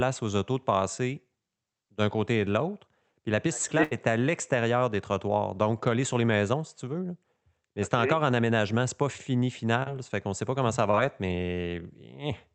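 At 3.83 s there is a burst of packet loss running to 3.93 s. About 80 ms of the speech never arrived in time, and the receiver spent roughly 76 ms continuing the last sound it had while fading it down. This gives a held, decaying sound in place of the real signal. The speech then picks up further along, with that stretch simply gone.

Two short concealed packet losses follow, at 9.83 s to 9.89 s and at 10.91 s to 10.95 s. Each lost about 20 ms. The decoder patched the holes by extrapolating from the preceding audio, about 30 ms of fill in the first case and 19 ms in the second, then cross-faded back to the received signal. Both come across as a brief smear or wobble. At 9.83 s about 7 ms of the sound is dropped outright. The speech has passed through an Opus call path whose audio stops at 8 kHz.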